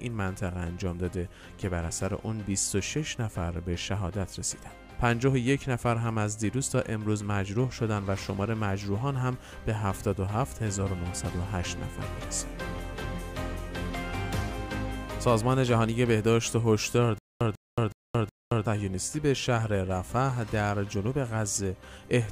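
At 17.18–18.66 s, stutter with silent gaps: a likely stalled stream replays a 145 ms burst four times, identical waveform blocks between flat-line silences, every 369 ms.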